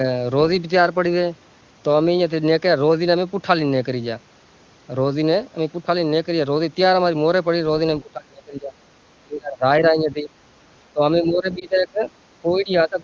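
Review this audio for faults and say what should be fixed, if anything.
Speech suppressed in double talk: while both sides spoke at once, the echo canceller likely mistook the near talker for loudspeaker echo and turned the signal down. The sound dips or breaks up at 8.02–8.74, 9.21–9.64, 9.80–10.30, 10.93–11.01, 11.20–12.04 and 12.42–13.00 s. The first two drops reach about 30 dB, and the later ones about 10 to 15 dB. To prevent this, tune the echo canceller's double-talk detection and use a loudspeaker-to-microphone path with less coupling, so it stops suppressing near-end speech.

Lost AMR speech frames: radio errors made a frame fail its checksum, so the AMR-WB decoder filled the gap by repeating the last good pitch and vocal tract settings at falling gain. This gives a brief dip or warble at 11.59–11.66 s, inside the suppressed stretch, which fits one lost 20 ms frame. To prevent this, improve radio coverage or error protection so frames arrive intact.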